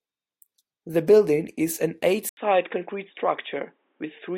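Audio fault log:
2.29 to 4.37 s, input switched to a poorer device: the system likely moved to a narrower-band microphone or headset profile. After an 80 ms silence, the speech loses everything above 3.8 kHz and turns dull and boxy, with faint new background noise but unchanged loudness.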